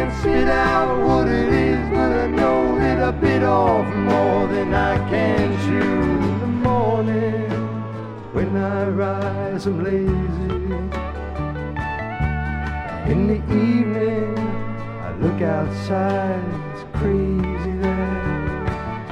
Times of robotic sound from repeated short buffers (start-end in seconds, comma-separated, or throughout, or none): none